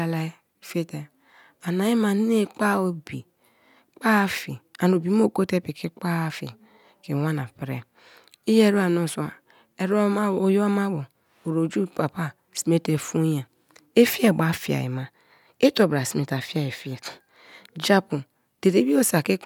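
No faults are audible anywhere in the recording.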